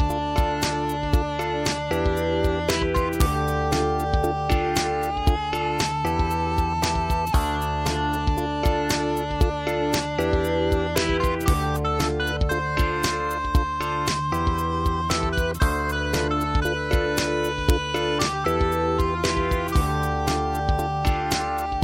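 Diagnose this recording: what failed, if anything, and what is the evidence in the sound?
Integer overflow in the sample-format or gain stage produces sharp cracks at 2.70, 3.21, 6.84, 9.94, 10.98, 11.48, 17.19 and 17.70 s. Peaks overshooting full scale by at most about 1 dB wrapped to the opposite extreme instead of saturating, so each becomes a full-range jump harsher than clipping.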